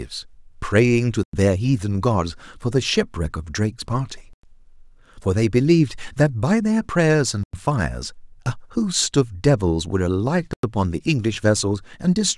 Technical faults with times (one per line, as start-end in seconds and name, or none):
1.23-1.33 gap between chunks
4.33-4.43 gap between chunks
7.43-7.53 gap between chunks
10.53-10.63 gap between chunks